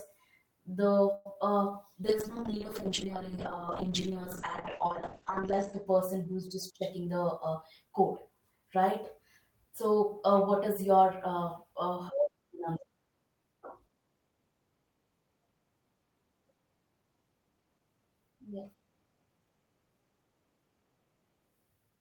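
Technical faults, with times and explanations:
1.14–1.26 s, call audio freeze: the sound stalls about 0.11 s as a fading continuation, likely from delayed packets; audio then resumes where it stopped, nothing lost.
1.31 s and 1.34–1.36 s, short concealed packet loss: brief smears where about 10 ms went missing each time and was patched, unlike a freeze, which adds delay.
2.05–6.33 s, call bitrate drop: encoding falls from 32 to 7 kbps, cutting bandwidth from 20 kHz to 8 kHz, so speech turns muffled and rough for seconds.
6.81–8.83 s, jitter buffer speed-up: speech runs about 6% faster at unchanged pitch as roughly a tenth of a second is trimmed away, draining the built-up delay.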